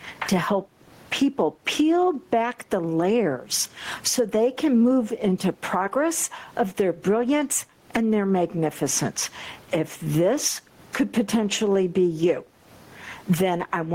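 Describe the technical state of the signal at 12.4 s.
At 12.4 s, as throughout, loud and soft parts sit closer in level and the sound is squashed, with a gain swing of around 20 dB. This is gain pumping, likely from an over-high microphone gain clamped by a fast limiter.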